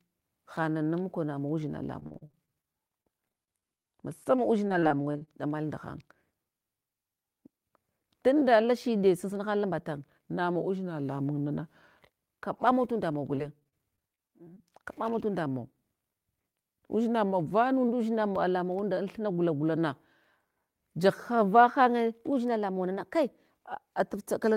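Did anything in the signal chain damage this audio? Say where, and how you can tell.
Yes. The network stage shows repeated packet loss (robotic sound) in three stretches. From 1.99 to 3.86 s, right after "mukonamawu udzina", there are 19 gaps, the longest 41 ms, with about 22% of the span concealed. From 4.24 to 5.29 s there are 8 gaps (longest 28 ms), and from 13.12 to 14.58 s there are 11 (longest 30 ms). Each hole is patched by extending the previous sound, which gives a choppy quality with pieces missing. On a spectrogram this shows as short smeared, repeated harmonic blocks. The waveform has flat or copied cycles between them.

The receive buffer shows a jitter buffer speed-up at 9.07 to 9.89 s, where playback runs at 106% and about 50 ms is trimmed. It happens again at 16.31 to 16.62 s, at 109% with around 40 ms removed. The buffer had overfilled, and the receiver shortened it by cutting out one or a few pitch periods at a time, so the sound is hurried while the pitch holds steady. 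In the waveform, periods vanish at splice points. The spectrogram keeps the harmonic spacing while the syllables compress in time.

Three drift correction steps change speed and pitch together. From 10.56 to 12.26 s and from 15.47 to 17.88 s, playback slows by 6.2% and drops about 111 cents. From 22.32 to 23.49 s, it speeds up by 6.2% and rises about 105 cents. The likely cause is clock-matching software in the playback or driver buffer stepping its rate to rebalance. On a spectrogram, every harmonic shifts as a block at the step boundaries.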